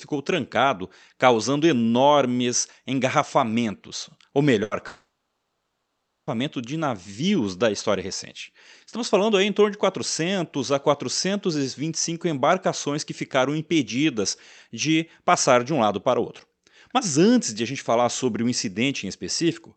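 A speech recording with two gaps in quick succession. The first is a burst of packet loss from 4.63 to 4.74 s. For about 80 ms the receiver stretches the last sound it had, fading it down, so a short held buzz or hiss replaces the real audio. Speech then picks up again, but about 80 ms of it never arrives and is simply skipped. At 4.87 s a much longer gap opens. This is likely a long network dropout. It lasts until 6.30 s. The concealment first extends the last sound and lets it fade. Then about 1.2 s of near silence follows. About 1.4 s of the original speech is lost outright. The audio returns on "de navios da história". Throughout, the band tops out near 8 kHz with codec grain. That fits a call codec such as Opus at around 40 kbps.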